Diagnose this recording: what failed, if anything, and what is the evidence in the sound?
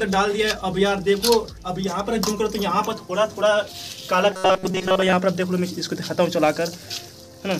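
From 4.32 to 5.13 s the sound collapses into a rigid, metallic buzz pitched at 188 Hz that only loosely tracks the material underneath, which is the signature of robotic sound from repeated short buffers. The likely cause is at the driver or buffer stage: fresh audio arrived too seldom, so a fragment of about 5.3 ms was looped to fill the gaps, most of the real audio in that stretch was skipped, and the loop rate imposed the fixed buzz pitch.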